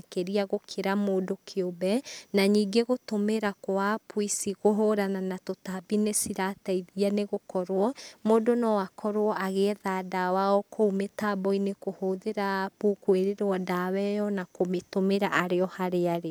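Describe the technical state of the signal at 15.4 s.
At 15.4 s the speech signal is intact, with no technical fault present.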